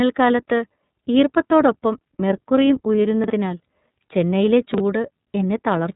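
Throughout, the speech sounds muffled, slightly rough and synthetic, with nothing above about 3.8 kHz. This is iLBC codec damage, consistent with its 13.33 kbps, 30 ms frame mode. At 3.24 to 3.3 s, just after "ഈർപ്പത്തോടൊപ്പം മെർക്കുറിയും", and again at 4.74 to 4.8 s, a brief jumbled stutter occurs where 20 ms chunks are out of order: one chunk plays two chunks late, leaving three hard joins.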